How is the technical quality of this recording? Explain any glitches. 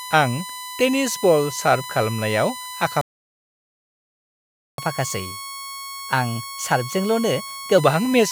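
The recording has three technical problems: a steady electrical whine, a long dropout, and a stretch of sped-up playback after it.

USB whine runs through the whole clip. Current drawn by the USB bus in 1 ms frames leaks into the audio through power or ground, producing a fixed-pitch tone at 1 kHz. It sits about 15 dB below the speech.

A playback stall cuts the speech from 3.01 to 4.78 s. The player likely ran out of buffered data or had its thread blocked, so the output fell silent. The speech stops mid-flow and the gap lasts 1.77 s before it resumes.

Catch-up at higher speed follows from 4.78 to 7.78 s. To recover the lost time, the player resamples its backlog at 1.1 times normal speed. The speech runs faster and about one and a half semitones higher, then settles back to normal.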